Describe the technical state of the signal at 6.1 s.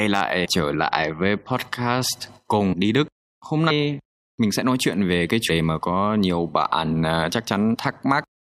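At 6.1 s the speech signal is intact, with no fault present at that moment.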